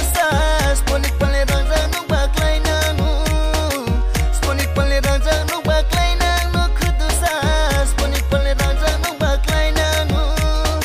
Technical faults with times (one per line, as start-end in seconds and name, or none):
none